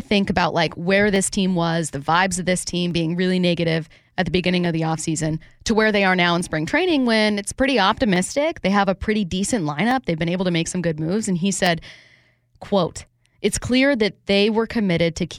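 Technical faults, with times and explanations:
1.16–15.17 s, clock drift buffer slips: starting just after "think about like where", about ten short clicks recur every 1.75 s while sound is present. This is likely two unsynchronised clocks differing by roughly 200 ppm, with each slip dropping or repeating about 15 samples.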